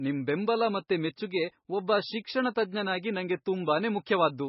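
Speech with heavy MP3 compression throughout: the treble stops dead near 5.6 kHz and the sound turns watery and swirling, which fits a very low bitrate, likely around 18 kbps. A plain low-pass filter would dull the top the same way, but it wouldn't add this swirl or chirping.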